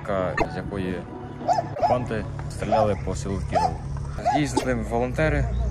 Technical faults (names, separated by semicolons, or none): broken MP3 bit reservoir